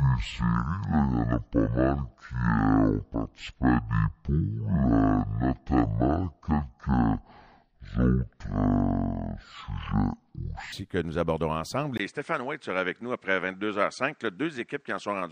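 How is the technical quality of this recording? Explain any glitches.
The recording has two clear faults. From 0 to 10.72 s, likely a wrong playback clock, the section at the wrong speed runs at half speed, so the speech drags and sits roughly ten semitones low until "que nous aborderons ensemble". At 11.97 s the system likely switched input to a poorer device. After a 20 ms gap, the sound to 15.32 s turns narrower and duller, drops about 5 dB, and gains noise about 45 dB down.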